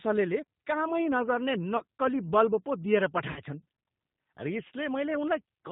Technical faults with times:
0.00-5.72 G.729 codec
1.77-1.83 VoIP packet loss concealed by the speech codec
3.31-3.42 VoIP packet loss concealed by the speech codec

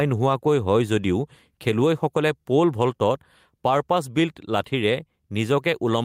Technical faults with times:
0.00-6.04 gain pumping

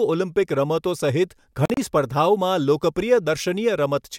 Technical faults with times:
1.65-1.77 Bluetooth dropout

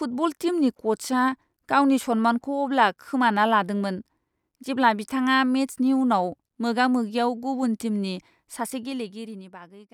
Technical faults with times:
8.55-9.91 zipper noise

